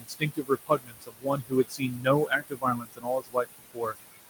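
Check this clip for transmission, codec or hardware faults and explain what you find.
The problems are processing faults: a noise suppressor is working throughout the speech and cuts into it twice.

Noise suppressor artifacts run for the whole clip. The room noise, sitting about 12 dB below the speech, is pulled down by about 18 dB whenever the suppressor judges a band to be steady noise. It dips between phrases and returns under the speech. That frame-by-frame pumping separates it from a fixed noise gate or a steady hiss.

Speech cut by the noise suppressor occurs from 0.00 to 2.07 s, with drops as deep as about 21 dB over roughly a second and a half, and again from 2.27 to 3.94 s, with drops of about 22 dB over about a second. Quiet consonants and word endings were mistaken for noise and turned down with the background, so they sound swallowed. Unlike packet loss, there is no abrupt gap or click, just fading.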